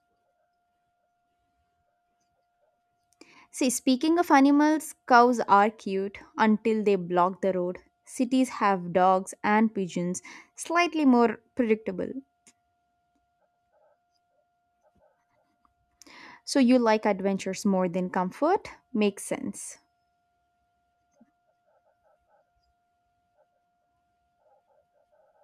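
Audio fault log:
6.87 s dropped samples: the stream likely skipped a handful of samples, well under a millisecond, between "cows are cute until" and "block the road", so the waveform jumps abruptly to a later value, producing one sharp click with no audible gap in the speech.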